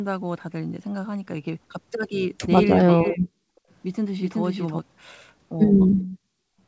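At 2.79 to 2.84 s and again at 3.06 to 3.12 s, a faint copy of the voice trails 403 ms behind. This is likely an echo leak, where a loudspeaker's echo canceller let some of its own playback through. It is very quiet, roughly 25 to 30 dB down, and shows on a spectrogram as a weak, smeared repeat of earlier harmonics.

From 2.93 to 3.34 s, the voice dips in pieces, falling as much as around 40 dB over roughly 400 ms. This is likely speech suppressed in double talk. The waveform thins into ragged gaps.

At 3.62 to 3.68 s and 6.10 to 6.15 s, the room sound briefly vanishes, by about 27 dB and then about 34 dB. This is background gated by the echo canceller, and it appears as short, near-silent notches across the whole spectrogram band.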